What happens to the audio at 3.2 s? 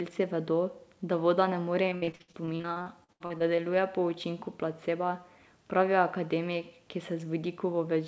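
At 3.2 s the speech sits inside a run of repeated packet loss (robotic sound), 1.90 to 3.60 s, between "da voda ne more" and "po učinku placeba". Repeated dropouts, up to 75 ms, are patched by stretching prior sound, so it turns choppy with pieces missing.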